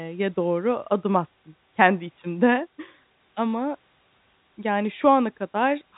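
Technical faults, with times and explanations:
No technical faults can be heard in the speech, which carries the narrow telephone band of G.711 A-law coding with nothing above about 3.8 kHz and no audible coding damage.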